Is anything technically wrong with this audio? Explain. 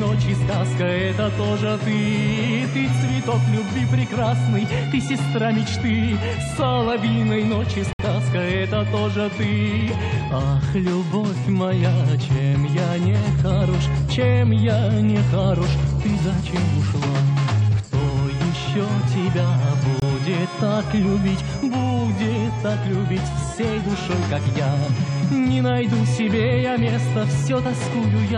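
Yes. There are two gaps between stream segments, at 7.93 to 7.99 s and at 20.00 to 20.02 s. The stream is delivered in 6-second segments, and at these two boundaries the timestamps leave a hole that the player fills with silence, adding about 63 ms and 23 ms respectively. Each one sounds like the sound briefly dropping out with abrupt edges. No material is lost; it simply resumes slightly late.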